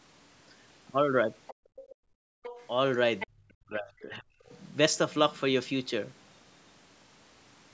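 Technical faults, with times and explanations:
1.47–1.54 s, 1.76–1.95 s, 2.43–2.67 s and 3.19–3.27 s, other side's voice leaking through: second-voice scraps sit roughly 10 to 20 dB under the talker, likely loudspeaker echo the canceller missed, rather than room noise.
1.54–2.43 s, background gated by the echo canceller: the room tone falls by about 32 dB for roughly 0.7 s in total, then returns.
3.25–4.52 s, speech suppressed in double talk: the talker's own voice dips by up to about 40 dB, affecting roughly 1 s, likely because both sides spoke at once and the canceller ducked everything.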